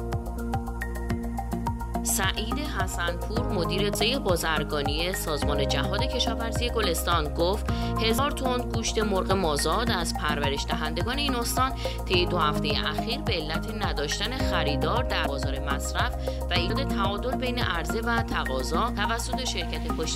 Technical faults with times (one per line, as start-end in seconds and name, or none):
0.37 compressed frames skipped
3.95 compressed frames skipped
8.18 compressed frames skipped
15.26 compressed frames skipped
16.69 compressed frames skipped
18.97 compressed frames skipped